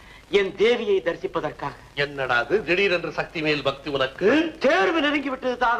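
No technical faults are audible anywhere in this audio.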